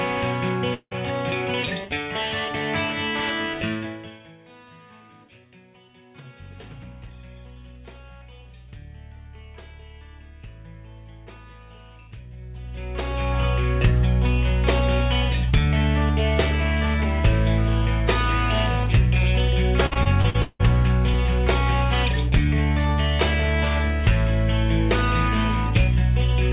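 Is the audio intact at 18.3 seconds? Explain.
Yes, the audio is intact at 18.3 seconds, with nothing there beyond the narrow, 4 kHz-limited sound of the G.711 A-law call path it travelled through.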